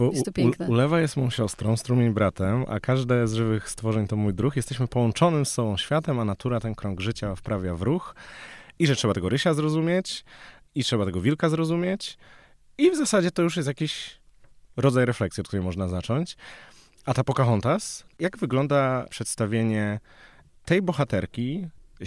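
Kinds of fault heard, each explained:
No dropouts, distortion, noise bursts, level jumps or other playback faults can be heard anywhere in this speech recording.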